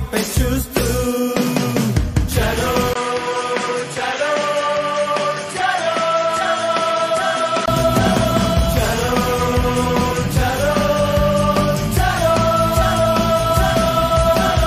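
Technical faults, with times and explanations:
2.93 to 7.68 s, input switched to a poorer device: after a 20 ms gap the sound turns duller, with nothing above 11.4 kHz, a little quieter and over faint new background noise. It then clears again, likely because the input jumped to a narrower-band microphone and back.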